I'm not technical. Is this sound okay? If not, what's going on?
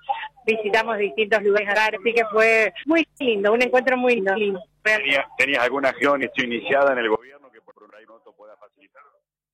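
No. Two faults are audible.

Frames out of order: at 1.57–1.97 s, 2.83–3.22 s, 4.17–4.56 s, 6.04–6.43 s and 7.71–8.09 s, a stretch of about 0.4 s plays with its two halves swapped. Each one sounds like a brief garbled flutter.

Audio dropout to a faint residue: from 7.16 s to the end, the sound suddenly drops to a faint leftover far below its normal level instead of stopping or fading. The likely cause is that the signal was lost while the equipment after the break stayed switched on. The last scramble falls inside this faint stretch.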